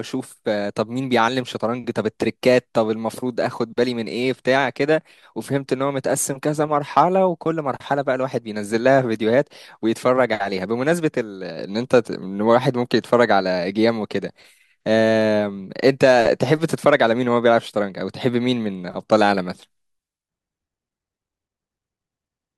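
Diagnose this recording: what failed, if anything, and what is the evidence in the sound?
Nothing failed; no faults detected.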